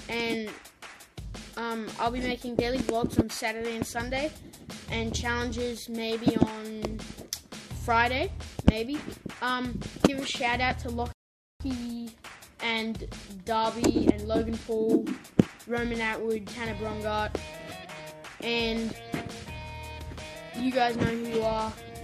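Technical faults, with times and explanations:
11.12 to 11.60 s, rebuffering stall. The sound drops to silence for about 0.48 s, then picks up exactly where it stopped. The player had run out of downloaded audio and waited for more. Nothing is missing, but the gap adds time.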